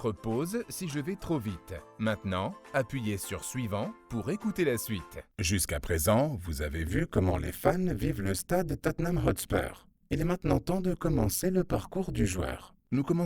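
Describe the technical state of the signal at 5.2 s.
At 5.2 s the signal is intact, with no technical fault to be heard at that moment.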